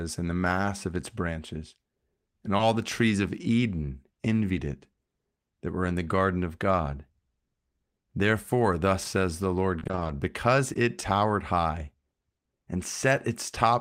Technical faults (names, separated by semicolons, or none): short concealed packet loss; repeated packet loss (robotic sound)